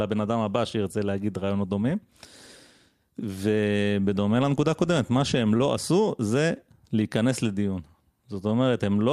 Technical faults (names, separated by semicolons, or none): short stall from a late packet